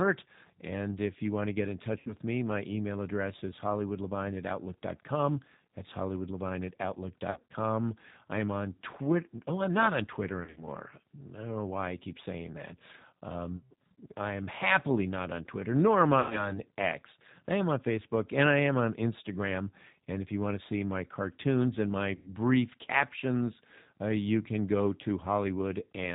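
A speech recording heard through the G.729 codec for its whole length: an 8 kbit/s coder that rebuilds the voice from a vocal tract filter, a pitch predictor and a few pulses per frame. The damage is plainly audible as a rough, slightly synthetic edge. On a spectrogram, energy stops dead at 4 kHz with nothing above, and the harmonics look smeared and grainy rather than clean. There are also six dropouts from VoIP packet loss concealed by the speech codec. The first, at 2.0 to 2.12 s, falls between "want to get in" and "me my email address", and its 60 ms gap fits three lost 20 ms packets. The second, at 7.30 to 7.52 s, comes after "hollywoodlevine at", with 140 ms lost in scattered runs of up to 60 ms. The others fall at 10.40 to 10.67 s, 13.57 to 13.73 s and 16.20 to 16.60 s. The last, at 22.15 to 22.30 s, sits between "my cartoons and my" and "captions uh you can". At each one the decoder stretches the last pitch and filter into a buzzy tone or coloured noise that fades. 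On a waveform this shows as a repetitive, shrinking envelope, and on a spectrogram as flat horizontal harmonic streaks. The voice stays weak for a moment after each gap.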